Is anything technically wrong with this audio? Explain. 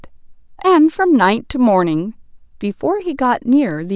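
No, nothing is technically wrong with this audio.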